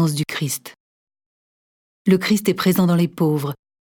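No technical faults can be heard anywhere in this audio; the signal stays steady and intact throughout.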